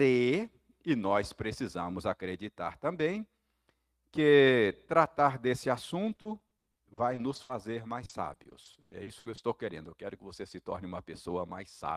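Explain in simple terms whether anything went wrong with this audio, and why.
Yes, from 6.07 to 7.51 s, right after "tratar desse", and again from 8.05 to 9.69 s, repeated packet loss (robotic sound) chops the speech, with short gaps patched by stretching the last sound.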